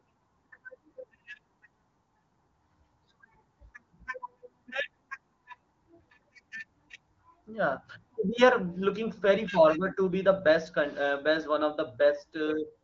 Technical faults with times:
none

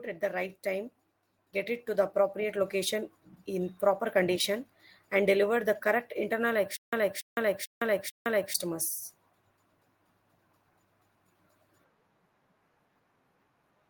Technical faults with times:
1.52-3.85 automatic gain rising
6.77-8.54 stutter with silent gaps

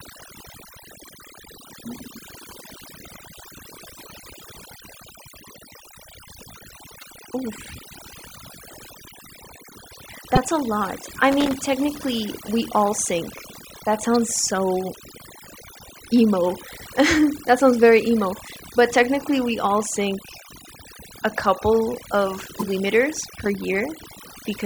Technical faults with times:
0.00-24.66 overdone noise removal
6.99-7.03 damaged data in a compressed stream
10.35-10.38 damaged data in a compressed stream
11.32-11.55 loose connector crackle
14.15 damaged data in a compressed stream
18.46-18.49 damaged data in a compressed stream
22.59-22.63 damaged data in a compressed stream
23.13-23.55 loose connector crackle

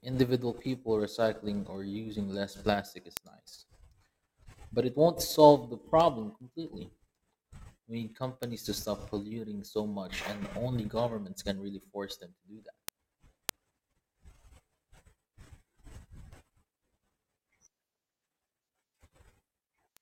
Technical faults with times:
0.13-19.97 word clock ticks

